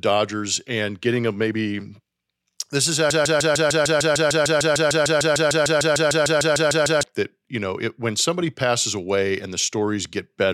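At about 3.10 s the speech gets stuck in a broken-record loop. A fragment about 150 ms long keeps repeating exactly, back to back, 26 times, until it lets go at 7.03 s. That gives you nearly four seconds of a rapid, mechanical stutter. The cause is likely a stalled player or stream that kept resending the last chunk it had buffered. Whatever was said during that stretch is simply gone.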